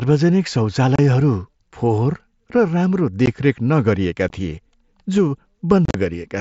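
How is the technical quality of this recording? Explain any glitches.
The recording has four dropouts from unconcealed Bluetooth headset packet loss, heard through a wideband mSBC headset link that passes speech up to about 8 kHz with light graininess.

The dropouts fall at 0.96 to 0.99 s (30 ms), 3.26 s, 4.29 s, and a scattered cluster at 5.85 to 5.95 s whose longest gap is about 38 ms. Each time, short voice packets between headset and phone never arrived and nothing filled the space. The result is abrupt holes, and the final cluster sounds rough and chopped. On a waveform these appear as flat silent notches with hard edges. A spectrogram shows blank vertical stripes with sharp boundaries.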